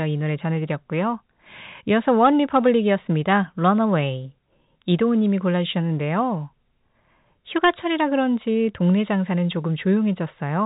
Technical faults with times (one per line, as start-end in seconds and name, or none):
none